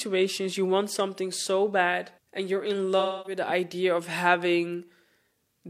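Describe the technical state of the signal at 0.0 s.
At 0.0 s the speech signal is intact, with no audible fault at that moment.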